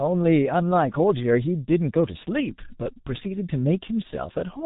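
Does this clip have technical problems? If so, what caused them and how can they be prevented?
Yes. The speech went through the G.723.1 codec for the whole clip, and the coarse, heavy damage points to its roughly 6 kbit/s mode. That codec passes nothing above 3.8 kHz and updates its voice model slowly, so the speech sounds muffled and hoarse with smeared consonants. To prevent this, route calls through a wideband codec such as Opus at a healthy bitrate.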